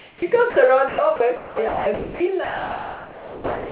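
A short speech recording over a narrowband call line, with nothing above 4 kHz (consistent with G.711 mu-law at 64 kbps), opens on a flat, textureless hiss from 0.00 to 0.22 s. It sits about 7 dB below the faint room background that follows and is about 28 dB under the loudest speech. That is comfort noise in place of the background. The sender likely detected no speech and paused transmission, so the receiver synthesised smooth noise instead of the real room sound. Within that stretch, from 0.16 to 0.22 s, the first speech arrives with a hard edge and no gradual rise, because the onset was clipped by the voice detector. The detector was likely slow to register that sound had begun, so about 60 ms of the start was never sent and comfort noise stood in for it. At 0.50 to 0.56 s the speech briefly gives way to the same steady hiss for 60 ms, with about 50 ms of real sound missing. This is sound dropped by the voice detector: a quiet part was likely judged to be background, transmission stopped, and synthetic noise filled the gap until the detector triggered again. 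From 0.88 s to 3.70 s the speech turns choppy, its quieter edges repeatedly falling out, with the room noise sitting about 41 dB below the speech. Roughly 2.06 s of this span was replaced. That is sound chopped by the voice detector, which likely toggled between sending and pausing more than once across the passage.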